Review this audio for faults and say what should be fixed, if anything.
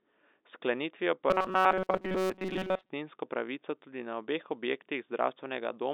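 Robotic sound from repeated short buffers runs from 1.30 to 2.90 s, ending just before "pravico tudi na obeh". The speech turns into a rigid metallic buzz at about 188 Hz. That pitch fits a repeated block of roughly 5.3 ms. Most of the audio in that stretch is repeated, not fresh. The likely cause is audio arriving too slowly, so the last short buffer is replayed while real audio is dropped. The G.711 telephone band, with nothing above 3.7 kHz, still carries through. Enlarging the jitter buffer and using proper packet-loss concealment would prevent this.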